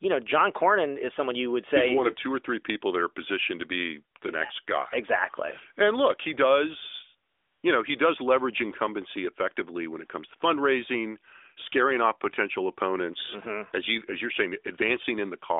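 A speech clip carried over a narrowband mobile link, band-limited to roughly 300 Hz to 3.6 kHz with the light coding texture that fits the 12.2 kbps AMR-NB mode, shows one instance of AMR comfort noise. From 7.30 to 7.64 s, between "look he does" and "you know he does", the sending side judged the line silent and stopped transmitting speech frames for 340 ms. The receiver filled that gap with generated noise built from a rough estimate of the background's level and spectral shape. The real room tone drops out and a smooth, even hiss takes its place, switching in and out at the pause edges.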